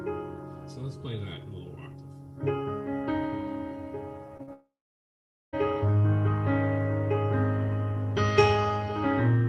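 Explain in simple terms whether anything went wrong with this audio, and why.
Yes, a couple of things went wrong, all bunched up around the middle. First, short concealed packet loss at 4.37 to 4.41 s and again at 4.43 to 4.49 s. Tiny chunks, roughly 20 ms and then 40 ms, never arrived, so the receiver patched each gap by stretching the sound just before it. You hear a quick smear or wobble rather than a clean hole.

Right after that, from 4.53 to 5.55 s, there's a long network dropout. The last bit of sound hangs on as a fading buzz for a moment, then there's close to a second of silence before the audio picks up again. About a full second of material is simply gone. The likely cause is the connection stalling completely for that stretch, so nothing came through to be played.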